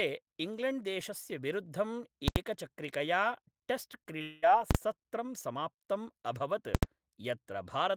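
At 1.67 s a single sharp click cuts through the speech, and clicks follow at 2.85 s, 3.84 s and 7.25 s. Each is likely caused by dropped samples: a tiny fraction of a millisecond of the stream goes missing, so the waveform leaps straight to a later value. That step is far too brief to remove any sound. Unlike the full-scale bursts, these are thin, isolated ticks with no loudness behind them.

From 2.28 to 2.36 s the output is pinned at one extreme value for an 80 ms block. Invalid numbers at full scale come from a calculation that produced infinite or invalid values, which were clamped to the maximum level. The result is a very loud pop at each edge with nothing audible between them. The same fault returns for 40 ms at 4.71 to 4.75 s, short enough to merge into one bang, and for another 80 ms at 6.75 to 6.83 s.

At 4.03 to 4.07 s and again at 4.19 to 4.22 s there is short concealed packet loss. 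Each time about 20 ms of the call arrived too late to decode, and the receiver bridged the gap by extending the preceding sound before blending back. It is heard as a brief smear or wobble.

Straight after the second of these, from 4.22 to 4.44 s, about 200 ms is missing, likely a long network dropout. The receiver keeps extending the last sound for the whole stretch, so a fading buzz or hiss fills the gap rather than silence. When the speech picks up again, the lost portion is simply gone. What sets this apart from the brief concealments is the length and the audible decay of the fill.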